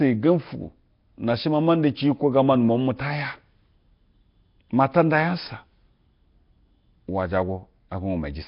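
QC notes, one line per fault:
Throughout, Nellymoser compression: the audio was likely passed through the Nellymoser Asao codec, which codes short blocks at a fixed, very low bit budget, consistent with a rate of about 22 kbps. Weaker bands are given no bits and filled with synthetic noise, so the speech carries a rough, hissy halo and a smeared, underwater blur. The damage is heavy, and nothing reaches above 5.3 kHz, which leaves the top end dull and closed in.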